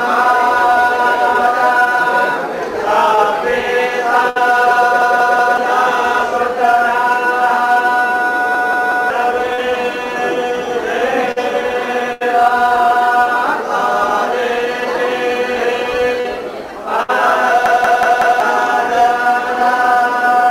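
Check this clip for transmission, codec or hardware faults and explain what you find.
Three kinds of transmission and playback fault are present: short concealed packet loss, bursts of packet loss, and repeated buffers.

Short concealed packet loss occurs at 3.15 to 3.19 s, 9.53 to 9.60 s and 16.20 to 16.26 s, with gaps of 20, 40 and 40 ms. In each case the decoder extends the preceding sound across the hole and then crossfades back, so each event is heard as a brief smear or wobble.

Bursts of packet loss occur at 4.29 to 4.37 s, 11.32 to 11.38 s, 12.12 to 12.22 s and 17.02 to 17.10 s, losing 60, 40, 80 and 60 ms. Concealment sustains the last sound while fading it out, producing a held buzz or fading hiss before playback resumes further along.

Repeated buffers occur at 5.02 to 5.57 s, 8.55 to 9.10 s and 17.66 to 18.40 s. A segment of about 186 ms, which fits an 8192-sample buffer, replays three, three and four extra times with hard joins. 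The result is an audible stutter that displaces roughly half a second, half a second and 0.7 s of audio.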